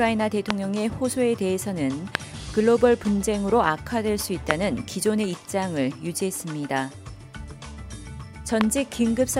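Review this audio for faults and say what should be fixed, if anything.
Loud pops at 0.50, 2.15, 4.51 and 8.61 s: single sharp bursts about 20 to 25 dB above the sound, likely voltage pulses from static, switching or a connector. To prevent this, secure cables and connectors, avoid switching equipment while recording, and ground the setup properly.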